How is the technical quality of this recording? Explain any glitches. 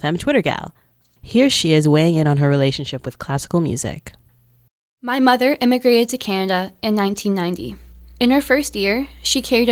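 Mains hum from 7.55 s to the end of the clip. At that point a steady 60 Hz tone enters beneath the speech, sitting roughly 20 dB below it. This is the power line leaking into the signal path, typically through a ground loop between connected equipment or from a transformer close to the cabling. It is heard as a constant low drone with some low harmonics that doesn't follow the speech at all.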